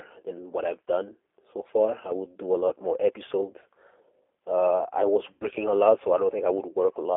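From start to finish the speech passes through a G.729 codec, and the coding damage is plainly audible. The band is limited to a telephone line, with nothing below about 300 Hz or above 3.4 kHz. The voice is rebuilt from a spectral-envelope filter, a pitch predictor and a sparse pulse excitation. That gives it the rough, slightly synthetic texture of an 8 kbit/s coder, with thin low end and dull, missing sibilance.

At 5.33 s there is VoIP packet loss concealed by the speech codec, lasting until 5.47 s. About 80 ms of audio was lost, and the decoder filled the gap by repeating its last pitch period and filter with falling gain. The sound is stretched out and fades. Because each frame builds on the one before, the voice stays weak or distorted for a moment after the stream resumes.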